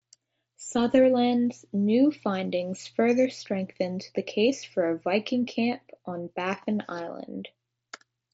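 No technical faults are present; the speech comes through the wideband mSBC Bluetooth headset codec, which leaves nothing above about 7.7 kHz and a light graininess on the louder moments.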